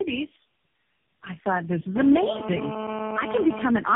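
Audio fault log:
throughout tandem speech coding: The speech is cut off above 3.5 kHz and sounds rougher, duller and more warbly than a single low-rate codec would leave it. That compounding fits three speech codecs in a row, ending in something like AMR-NB at 6.7 kbit/s, each re-coding the previous one's already damaged output. Its errors stack rather than merely narrowing the band as plain telephone filtering would.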